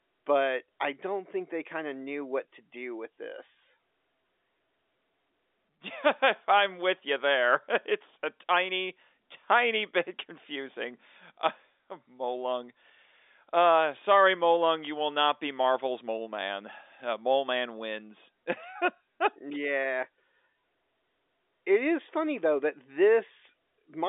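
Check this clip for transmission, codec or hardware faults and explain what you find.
Nothing's wrong here: it's ordinary telephone-band speech over 64 kbps G.711 A-law, with the usual line band of roughly 300 Hz to 3.6 kHz and nothing above 3.8 kHz, just as a phone line normally sounds.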